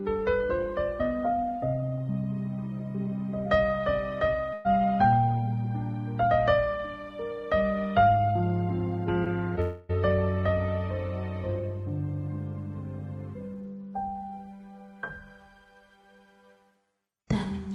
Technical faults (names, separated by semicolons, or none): burst of packet loss; short concealed packet loss; long network dropout